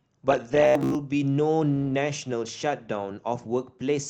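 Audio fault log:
0.65–0.98 s, robotic sound from repeated short buffers: speech becomes a stiff metallic buzz near 67 Hz, likely from a 15 ms chunk looping while most real audio is skipped.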